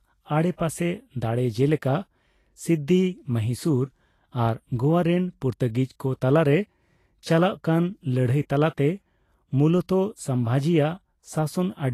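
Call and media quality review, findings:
Vorbis compression, entire speech clip. Hissy, grainy treble, roughened tones, blurred attacks. Likely cause: low-bitrate Vorbis encode, damage fitting roughly 35 kbps; coarse treble quantisation swaps detail for noise. Spectrogram: hard ceiling at 14.2 kHz, speckled upper bands.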